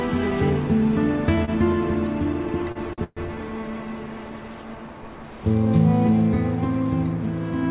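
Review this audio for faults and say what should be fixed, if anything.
At 1.45 to 1.50 s there's a short stall from a late packet. The jitter buffer ran dry and the last sound got stretched by 27 ms, with nothing lost. A slightly deeper jitter buffer would absorb a hiccup that small.

From 2.46 to 3.19 s you get repeated stalls, a stutter. Packets kept arriving late, so the buffer emptied four times and about 208 ms was filled in, the longest gap being 128 ms, roughly 29% of that stretch. Adaptive buffer sizing should stop it recurring.

The G.711 A-law call path itself tops out at 4 kHz, which is just what that codec does.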